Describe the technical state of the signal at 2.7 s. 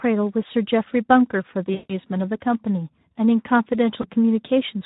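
At 2.7 s the speech carries Speex codec damage, present throughout: starved CELP excitation makes it plainly hoarse and noisy, consistent with roughly 11 kbps.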